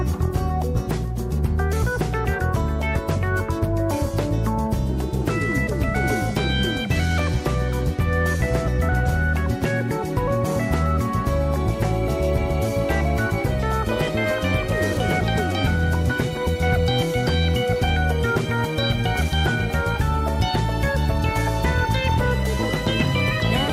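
No technical faults are audible.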